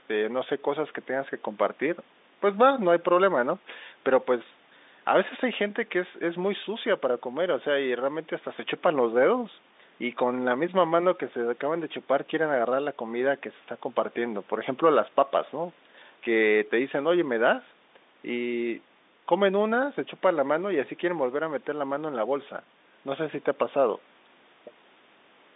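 No technical faults are audible.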